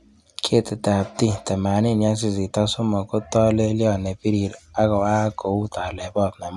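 No dropouts, clicks, distortion or other transmission faults are audible anywhere in the recording.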